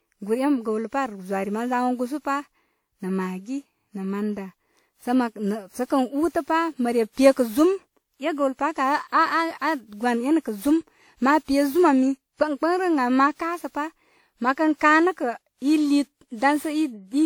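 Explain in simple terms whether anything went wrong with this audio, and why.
Generation loss: the speech was likely compressed and decompressed about seven times, so from start to finish it sounds swirly, hollow and smeared.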